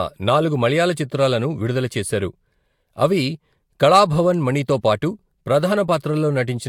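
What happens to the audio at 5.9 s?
At 5.88 s there's a corrupt frame decoded: a couple of damaged compressed frames got played anyway, so misread gains and codes throw energy into the wrong frequencies. It comes out as a brief, fairly quiet chirp, squeak, blip or burst of noise, peaking at about -30 dBFS.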